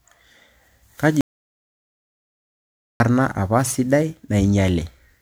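The whole clip has that swirly, hollow quality of generation loss, with smeared consonants and a watery top end. It's likely from being run through MP3 encoding half a dozen or more times, at around a 128 kbit/s rate, with each pass stacking fresh quantisation damage on a shifted frame grid.

At 1.21 s the speech cuts to dead silence, with no room tone at all, and stays gone for about 1.79 s until it returns at 3.00 s on "apa sidai". That's an audio dropout to silence, likely the input dropping out while the recorder kept writing silence.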